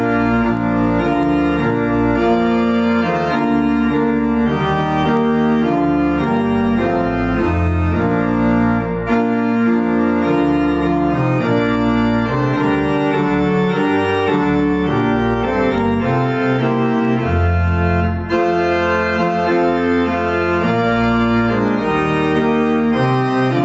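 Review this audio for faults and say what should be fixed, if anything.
Throughout, the gain ducks by around 5 dB under every loud sound. This is gain pumping, likely a fast limiter fighting excessive microphone gain. Lowering the input gain so the limiter rarely engages would prevent it.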